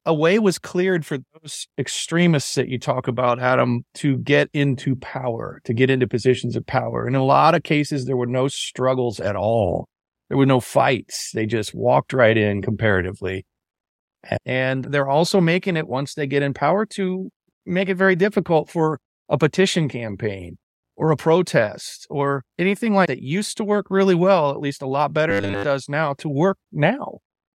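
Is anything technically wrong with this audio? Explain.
Yes. From 25.30 to 25.65 s, the speech turns into a robotic sound from repeated short buffers. It becomes a rigid, metallic 100 Hz buzz. That likely comes from 10 ms stretches repeating while most of the real audio is skipped.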